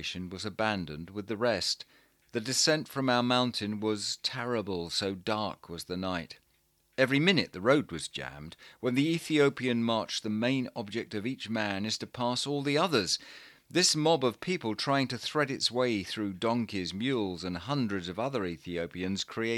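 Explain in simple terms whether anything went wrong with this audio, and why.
Nothing went wrong here.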